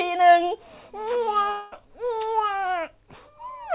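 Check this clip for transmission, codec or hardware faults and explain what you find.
One real fault here: a long network dropout from 1.52 to 1.74 s, over a call path whose band stops at 4 kHz, consistent with G.711 mu-law.

Long network dropout, 1.52–1.74 s: about 200 ms of speech just vanishes. What you hear instead is the last bit of sound smeared forward as a buzzy, fading tail that covers nearly the whole gap, so it never quite drops to silence. That's most likely packets lost in transit, with the receiver's concealment papering over the hole before the speech picks up again, minus the missing chunk.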